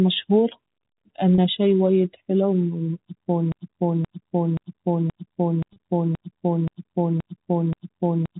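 A speech recording over a narrowband telephone channel: at 1.35 s, just before "شي وايد حلو اني", the sound briefly holds on a slightly buzzy tone for about 30 ms. This is packet loss with pitch repetition, where the receiver bridges the gap, which fits a single lost packet, by repeating the last pitch period. The same brief buzz recurs at 5.73 s. From 3.52 s, right after "شي وايد حلو اني", a 0.53 s fragment repeats back to back nine times until the end, a broken-record loop, likely from the player or stream stalling and resending its last fragment, so the audio that should have followed is lost.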